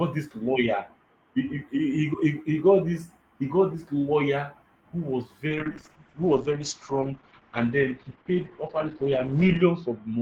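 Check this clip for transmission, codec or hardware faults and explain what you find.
One fault appears: a call bitrate drop. From 5.48 s to the end, the encoder is starved of bits. Speech turns rough and muffled, losing everything above 8 kHz. This fits a fall from about 32 to 8 kbps.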